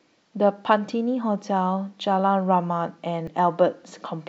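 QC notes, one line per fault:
3.25–3.28 s, damaged data in a compressed stream: a brief glitch of about 36 ms breaks into the speech. Corrupted bytes in the compressed stream make the decoder misread those frames and lose sync until it finds the next valid frame header.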